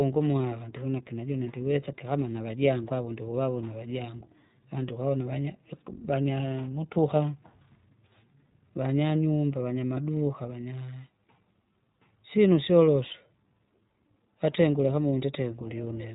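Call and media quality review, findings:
iLBC codec, throughout. Rough, synthetic speech; spectrogram shows a hard ceiling at 3.8 kHz, blank above. Narrowband VoIP codec coding each frame's excitation independently, consistent with 20 ms frames at 15.2 kbps. Codec damage plainly audible.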